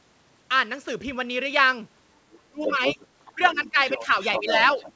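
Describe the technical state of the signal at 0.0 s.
At 0.0 s the speech signal is intact, with no fault present, and the band stops at 8 kHz, as expected for a wideband call codec.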